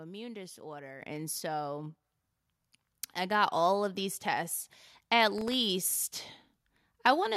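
At 1.02 s the microphone volume is stepped up: the call software decided the input was too quiet and bumped the device gain by about 8 dB in one go, so the speech and the room noise jump together. It happens again at 2.04 s, another step of about 4 dB.

Then from 5.38 to 5.54 s there's processor overload crackle. The CPU kept missing its deadlines on very short buffers, well under a millisecond each, a handful in a row, and replayed stale audio in the gaps, giving a brief gritty tearing over the speech.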